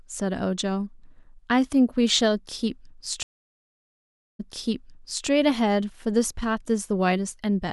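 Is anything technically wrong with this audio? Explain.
Yes. At 3.23–5.27 s, a stream reconnect: speech stops for about 1.16 s while the connection re-establishes. It then resumes 0.88 s earlier, repeating material, unlike a plain dropout.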